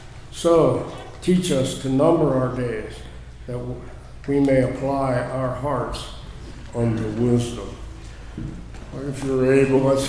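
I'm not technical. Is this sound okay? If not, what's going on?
No, not entirely. From about 6.51 to 9.77 s there's a wrong sample rate fault: that stretch plays back at about 92% speed and roughly one and a half semitones lower, which fits audio recorded at 24 kHz being played at 22 kHz, so it drags and drops in pitch together.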